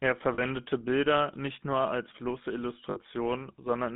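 Throughout, the speech passes through the GSM full-rate codec, which rebuilds the vocal tract from a sparse, regularly pulsed excitation, consistent with a 13 kbps full-rate link. The result is a buzzy, gravelly roughness, clearly audible, confined to a band from about 150 Hz to 3.6 kHz.

Lost GSM frames occur at 0.34 s and again from 2.9 to 2.99 s. The decoder covers each gap by repeating the last good frame, so about 40 ms and then 60 ms of sound is held as a rough, metallic ring.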